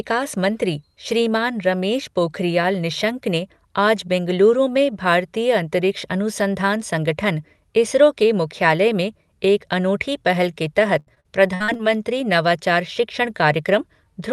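Repeated packet loss from 10.99 to 11.81 s, just after "पहल के", leaves seven holes up to 73 ms long, patched with stretched sound, so the speech turns choppy and robotic.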